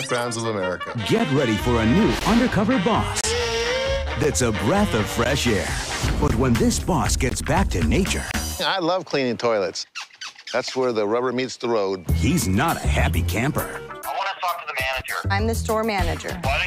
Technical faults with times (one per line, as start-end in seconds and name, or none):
1.19 gap between stream segments
2.19 gap between stream segments
3.21-3.24 gap between stream segments
4.23 gap between stream segments
5.24 gap between stream segments
6.28 gap between stream segments
7.29 gap between stream segments
8.31-8.34 gap between stream segments